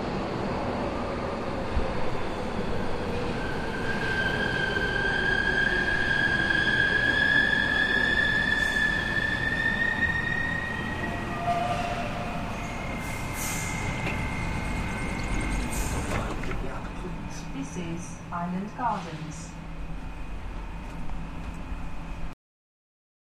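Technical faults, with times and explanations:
22.33–23.32 s, cut-off end: The sound stops abruptly at 22.33 s, in the middle of an event rather than at a natural pause. It falls straight to digital silence, with no decay or fade. The final stretch of buffers was never written to the file or passed to playback. Whatever should have filled that last second is simply missing. The silence then runs unbroken to the end of the clip.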